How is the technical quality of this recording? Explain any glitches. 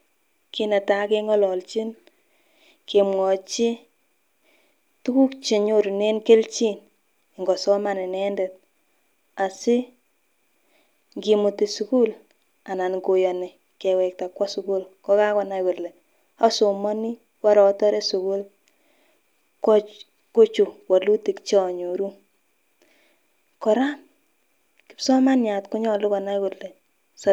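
No glitches or dropouts are audible anywhere in the speech recording, and nothing in it calls for a technical fix.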